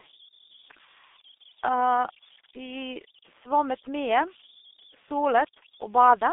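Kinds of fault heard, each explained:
Converter idle tones: Without dither, the delta-sigma converter settles into repeating bit patterns whenever the input is small, and those patterns turn into a steady tone. Here a thin whistle around 4 kHz sits under the speech throughout, about 22 dB below the signal, and is most exposed in pauses. On a spectrogram it is a persistent horizontal line near 4 kHz, and the waveform shows a fine ripple riding on quiet stretches.
G.723.1 codec: This low-rate telephony codec rebuilds speech from a slowly updated model in 30 ms frames, and the heavy damage here points to its roughly 6.3 kbit/s mode. The speech is confined to a band from about 250 Hz to 3.6 kHz, with nothing above 3.7 kHz, so it sounds muffled, hoarse and smeared at the consonants. A spectrogram shows a hard ceiling at 3.7 kHz and blocky, blurred formant detail. The waveform's onsets look softened.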